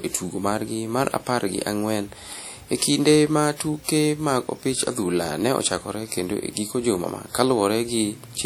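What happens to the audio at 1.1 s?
At 1.1 s the speech carries the ringing, washy texture of WMA compression. It is not a passing event. The damage runs through the whole clip and is plainly audible. The likely cause is a transform codec at a low rate, consistent with about 48 kbps. Its long blocks smear quantisation noise over tens of milliseconds, so a hiss swells and fades with the speech. Nothing is heard above 19.7 kHz.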